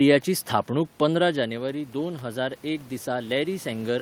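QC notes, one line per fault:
1.3 s to the end, automatic gain rising: After the talker moves back around one second, the level at the microphone falls by about 10 dB. The gain control responds by slowly turning itself up. Voice and room noise swell together over the rest of the clip.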